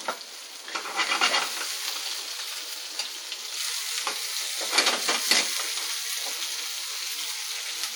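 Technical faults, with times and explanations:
Throughout, WMA compression: ringing, washy smearing with hiss breathing alongside the sound, likely long-block transform quantisation noise spreading over tens of milliseconds, consistent with roughly 48 kbps.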